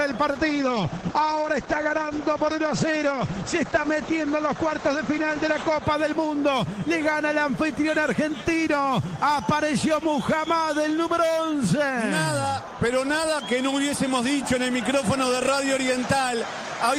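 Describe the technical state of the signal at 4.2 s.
At 4.2 s the signal is inside a call bitrate drop lasting from 0.36 to 5.89 s. The encoder is starved of bits, which fits a fall from about 32 to 10 kbps. The coarser coding and a cut-off near 8 kHz leave the sound rough and muffled.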